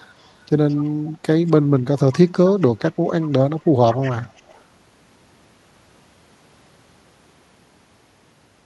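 Echo leak appears at 0.21, 0.68, 1.47, 2.38, 3.06 and 3.92 s, the last lasting until 4.62 s. A delayed copy of the speech trails it by 216 ms. It begins very faint and grows louder. An imperfect far-end echo canceller is likely the cause.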